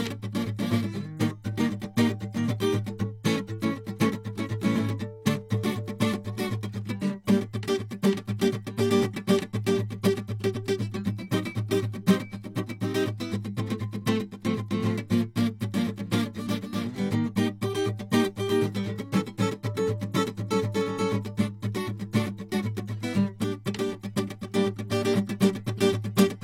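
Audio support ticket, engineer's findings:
Pre-echo at 23.65 s: brief hiss about 11 ms ahead of a sharp music attack, attack edge soft and smeared. Probable component: transform codec. Cause: quantisation noise spread across the whole block, leaking into the quiet stretch before a late-falling transient.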